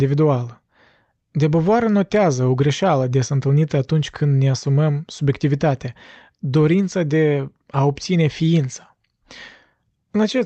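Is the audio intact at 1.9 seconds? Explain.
Yes, the speech at 1.9 seconds is intact, with no dropout, glitch or other fault at that moment.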